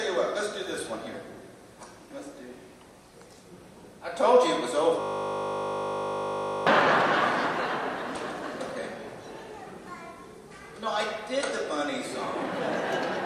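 From 5.01 to 6.67 s, a system hang loop: playback froze and one 20 ms buffer replayed exactly, giving a 50 Hz buzz that starts and stops abruptly, unlike hum.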